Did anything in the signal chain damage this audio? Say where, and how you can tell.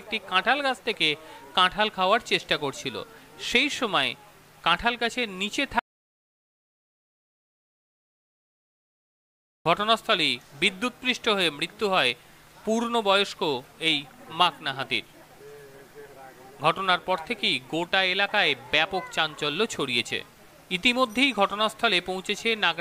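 Yes. From 5.79 to 9.66 s the sound cuts to dead silence with no room tone, an audio dropout to silence, likely from the input link failing while silence was recorded.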